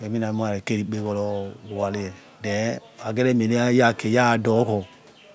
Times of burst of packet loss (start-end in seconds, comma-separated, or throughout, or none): none